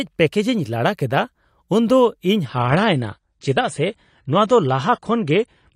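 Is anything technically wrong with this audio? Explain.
Yes. From 2.47 s to the end, the speech shows an adaptive stream at a lower bitrate. The player switched to a leaner encoding, with a sudden drop in quality and no gap: nothing above 10.1 kHz, thinner treble and more audible codec artefacts, consistent with a fall from roughly 96 to 32 kbit/s AAC.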